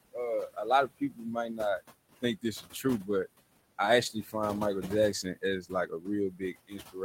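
Noise suppressor artifacts run through the whole clip. The room noise, sitting about 14 dB under the speech, is being pulled down by about 20 dB in the gaps and let back up beneath the voice, so the residue pumps.

Speech cut by the noise suppressor occurs at 0.88–1.25 s, 2.22–3.27 s and 4.13–4.34 s, each time swallowing a couple hundred milliseconds or less of quiet speech by about 13–14 dB. From 5.23 s to the end it drops by as much as about 19 dB, so the speech there sounds faint.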